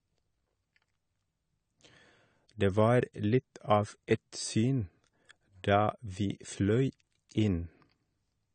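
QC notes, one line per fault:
throughout, AAC compression: speech sounds dull and smeared, with fizzy, warbling sibilants and nothing above 9 kHz, likely from coarse AAC-LC quantisation at roughly 32 kbps.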